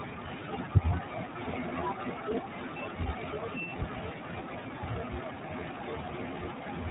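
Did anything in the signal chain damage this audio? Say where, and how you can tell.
Yes. Throughout the speech there is a narrow, telephone-like band with nothing above 4 kHz, and a rough, slightly synthetic quality that is plainly audible. This is damage at the codec stage, from the iLBC codec. It codes the excitation of each 30 ms frame independently of the frame before, which fits its 13.33 kbps mode.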